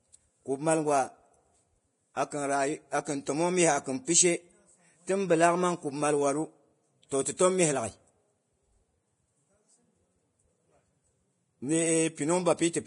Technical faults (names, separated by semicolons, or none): Vorbis compression